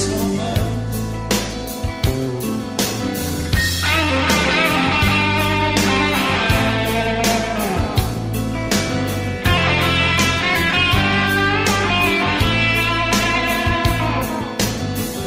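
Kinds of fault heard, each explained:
No dropouts, clicks, distortion or other transmission faults are audible anywhere in the clip.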